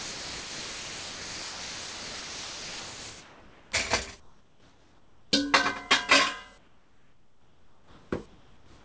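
It's a recording of everyday sounds, and the opening 3.72 s is sound dropped by the voice detector: roughly 3.1 s of real sound gives way to steady hiss, likely because the sender's detector mistook it for background and stopped sending. After that, the background keeps getting replaced by comfort noise at 4.20–5.32 s, 6.58–8.12 s and 8.26 s to the end. The real ambience turns flat and featureless and drops by about 5 dB (about 3 dB in the last stretch), likely from discontinuous transmission filling the pauses with synthetic noise. Nothing reaches above 8 kHz, which fits a G.722 call path.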